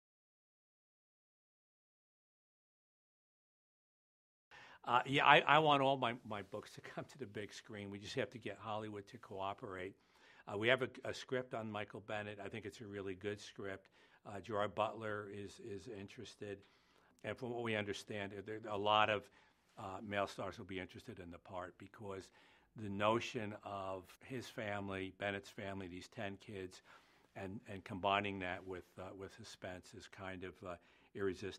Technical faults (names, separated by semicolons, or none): none